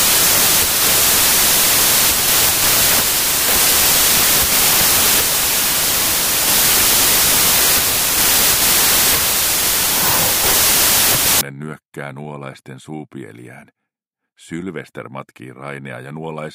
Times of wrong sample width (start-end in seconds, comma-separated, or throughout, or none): 0.00-11.41